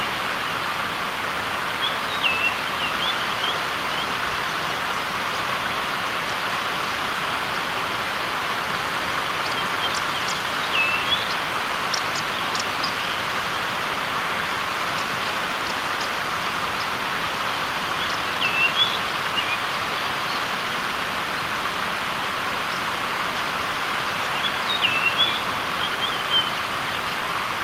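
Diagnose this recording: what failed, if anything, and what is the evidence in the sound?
Nothing failed; no faults heard.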